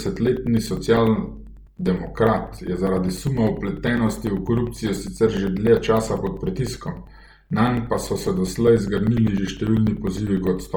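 Throughout the speech, a breathy, grainy hiss replaces upper detail. This is likely Bluetooth LC3 compression at a heavy setting, around 32 kbps, filling the spectrum with noise rather than dulling it.

From 0.07 s to 10.67 s, periodic USB or driver dropouts cut roughly 4 ms of silence every 0.1 s, around a hundred ticks. Their strict regularity distinguishes them from random packet loss.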